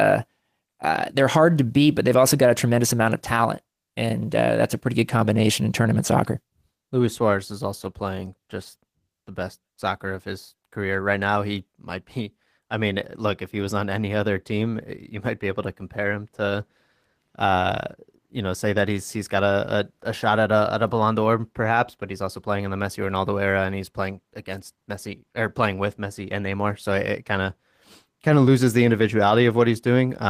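No audible faults detected.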